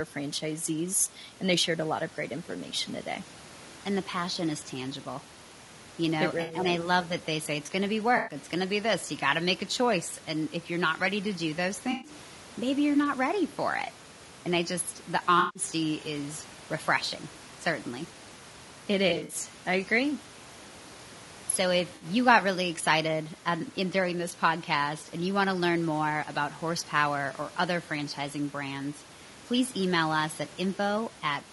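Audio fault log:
throughout, low-delay AAC compression: the speech sounds rough and grainy, with a noisy fill between the pitch harmonics and a top band that sounds thin and synthetic. Room noise sits about 24 dB below the speech. The likely cause is AAC-ELD. Its very short frames resolve the harmonic structure of the voice poorly and use up bits, and the plainly audible damage fits a bitrate around 32 kbps.
6.41–6.55 s, 8.17–8.35 s (between "it's going to be" and "going to be this"), 11.91–12.11 s (between "ready to do those" and "maybe you're not ready"), 15.39–15.63 s, 19.09–19.35 s, 21.95–22.05 s (just before "got really excited um"), AAC frame loss with concealment: brief smeared, noisy or phasey patches, each about 60 to 160 ms long. At 19.09 s the damage is broken into pieces over about 200 ms, with the longest stretch around 70 ms. Whole frames of audio went missing, and the decoder rebuilt each gap from the last good spectrum, scrambling or interpolating it. 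That guesswork replaces the real detail with a blurred wash. The gap lengths fit 20 ms frames.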